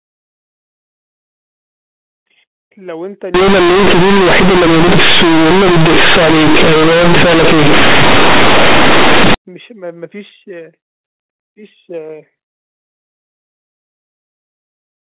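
Companded audio read as linear, 3.34 to 9.34 s: mu-law bytes play as plain 8-bit samples without expansion, so the speech turns loud and buzzy, with heavy noise in pauses.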